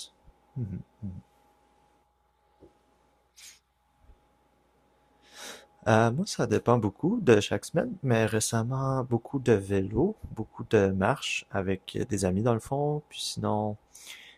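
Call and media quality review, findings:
No audible faults found.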